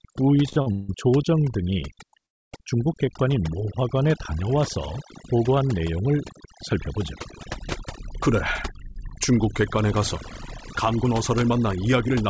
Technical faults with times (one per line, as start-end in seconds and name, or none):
0.00-12.29 overdone noise removal
0.49-0.89 repeated stalls (stutter)
2.26-2.52 call audio freeze
8.70-12.17 jitter buffer speed-up